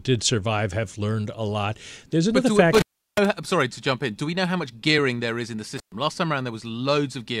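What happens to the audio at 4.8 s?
Nothing goes wrong at 4.8 s: the speech continues intact through that moment, with no dropout, click, distortion or other audible fault.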